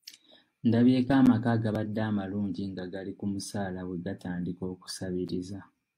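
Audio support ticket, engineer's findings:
Gap between stream segments: segment timestamps leave a hole, filled with silence. Hard-edged dropout of about 10 ms in the speech at 1.26 s and 5.28 s, fitting 2 s segment boundaries. No audio lost.

Repeated buffer: audio missed its deadline, so the device replayed the last buffer twice more. Brief click or buzz at 1.75 s, fitting a 64-sample buffer of about 1.3 ms.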